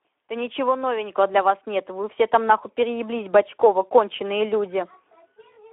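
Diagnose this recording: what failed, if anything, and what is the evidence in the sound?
Speex codec damage runs throughout the speech. The band is confined to about 300 Hz to 3.6 kHz, and the voice sounds hoarse and noisy, which fits roughly 11 kbps Speex: the CELP coder has too few bits to model the excitation accurately, so roughness replaces natural voicing.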